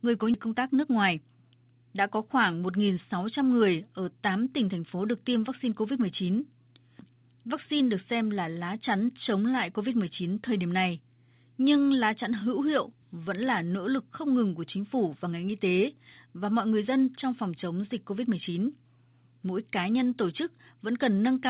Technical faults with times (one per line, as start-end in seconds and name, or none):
0.34 skip ahead
0.46-1.79 jitter buffer speed-up